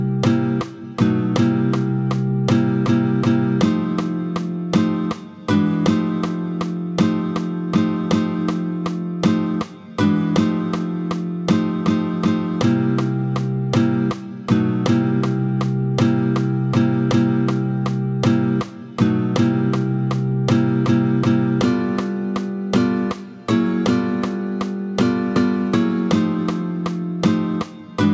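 Nothing in the audio stands out as a technical fault, so there's nothing to flag here.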